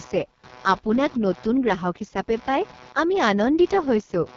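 From start to finish the speech sits over a faint buzzing, chirping undertone, a ragged pulse repeating somewhere around 150 Hz and roughly 25 dB below the speech. It follows the computer's activity rather than the talker: computer activity noise, where processor, graphics or mouse load disturbs the audio circuit's shared ground.

Throughout, the speech also sounds rough, raspy and buzzy, and nothing reaches above 7.2 kHz. This is heavy damage from the AMR wideband (HD Voice) codec, with a harshness that points to its lowest rate, about 6.6 kbit/s. At that rate the pulse-driven vocal tract model cannot carry the speech cleanly, and the top band is filled with shaped noise rather than real detail.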